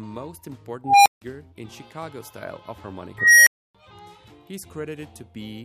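An unstable filter fault occurs twice. From 0.84 to 1.22 s a tone around 700 Hz swells over 0.22 s into clipping, then cuts to 160 ms of silence. From 3.18 to 3.75 s a tone around 2 kHz builds over 0.29 s, followed by 280 ms of silence. Bad recursive coefficients made the output grow until it overflowed and reset.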